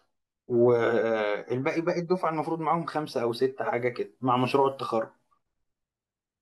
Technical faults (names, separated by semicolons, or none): none